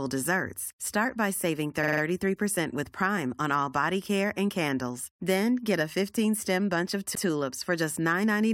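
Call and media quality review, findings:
Repeated frames, 1.82–2.01 s: 46.4 ms block replayed four extra times, heard as rapid stutter, fits a two-frame run. 7.14–7.23 s: 92.9 ms block played once more, fits four frames. Encoder output or transport resent compressed frames; decoder replays them, adding 185.8 ms and 92.9 ms.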